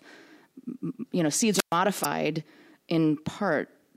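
At 1.51 s, just after "you know", a wireless microphone squelch dropout begins. The radio signal fades and hiss swells. Then the receiver's squelch mutes the output for about 120 ms. The speech returns by 1.77 s.

From 2.00 to 2.05 s comes damaged data in a compressed stream. Corrupt bytes make the decoder misread frames and lose sync. It hunts for the next valid frame header. The result is a brief glitch.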